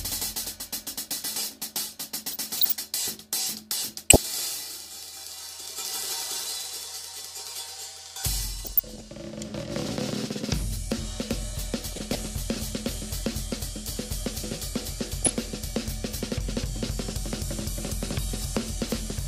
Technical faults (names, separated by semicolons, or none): DAB burbling